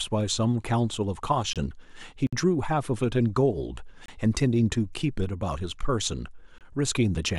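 Speech interrupted by gaps between chunks: 25 ms hard-edged silences at 1.53, 4.06 and 6.58 s, spaced 2.5 s apart, showing as clean vertical blank strips in the spectrogram. A 57 ms gap at a join of encoded pieces opens at 2.27 s, where untrimmed encoder delay and padding leave a flat waveform with smeared edges.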